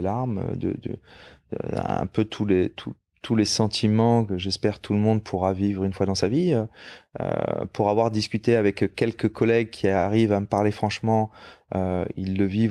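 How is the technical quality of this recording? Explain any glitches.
The technical quality of this recording is sound, with no glitches to explain.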